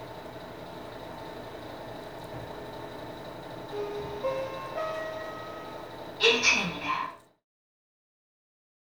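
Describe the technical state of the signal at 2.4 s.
At 2.4 s the signal is intact, with no dropout, clipping, click or other fault in the audio at that point.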